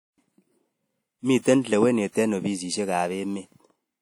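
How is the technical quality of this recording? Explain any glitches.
Quality is compromised by one codec fault throughout the speech. It rings and smears washily, with hiss swelling alongside the speech, likely WMA compression at a low bitrate around 48 kbps. Long transform blocks spread quantisation noise across tens of milliseconds. Unlike a low-pass fault, content still extends to about 20.1 kHz.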